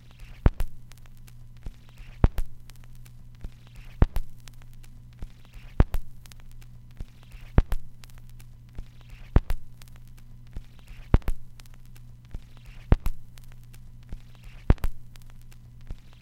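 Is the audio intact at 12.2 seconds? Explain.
Yes, the audio is intact at 12.2 seconds, with no fault to be heard at that point.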